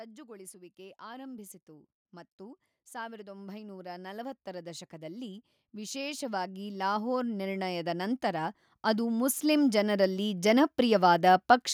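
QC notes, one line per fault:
0.16–11.5 s, automatic gain rising: the gain control judged the input too quiet and slowly raised level by about 25 dB, so speech and background swell together.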